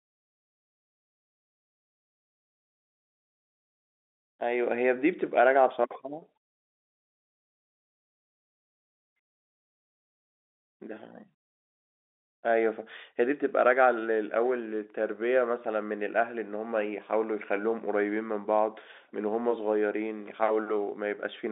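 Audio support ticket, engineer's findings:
Engineer's findings: no fault found in this audio, nothing to action on the ticket.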